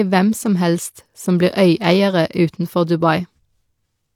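Nothing technical stands out in this bit of speech, so there's no problem here to point to.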